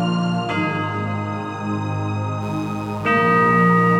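At 2.39 s a mains buzz starts and continues to the end of the clip. Sharp switching spikes from the supply have leaked into the signal path, repeating twice per 60 Hz cycle, so the interference is rich in 60 Hz harmonics. It sounds like a steady, raspy buzz roughly 25 dB below the audio. A spectrogram would show evenly spaced horizontal lines at multiples of 60 Hz reaching into the kilohertz range, and the waveform would carry a regular 120 Hz train of small spikes.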